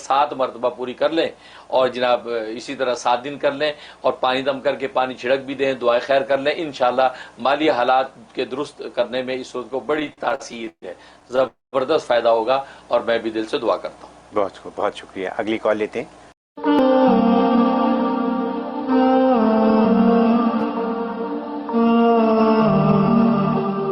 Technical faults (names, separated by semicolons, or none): gain pumping; repeated stalls (stutter); call audio freeze; jitter buffer speed-up